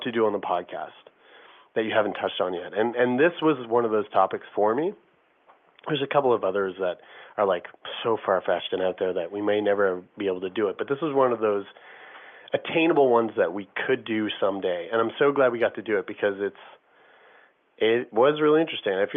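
There are no technical faults to describe in this speech clip, so there is nothing to place in time order.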